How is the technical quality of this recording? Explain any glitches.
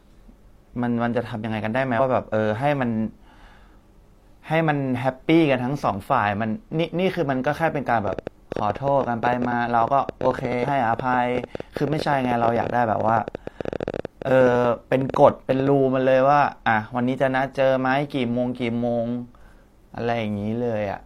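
The recording has two kinds of glitch, both in its middle section.

From 8.08 to 15.68 s a train of clicks runs at about 11.4 per second, irregularly spaced and peaking about 10 dB above the speech. This is likely interference injecting pulses.

At 9.48 to 9.53 s and 10.59 to 10.65 s, compressed frames were skipped. The speech jumps ahead roughly 150 ms, then 100 ms, which fits whole 46.4 ms frames.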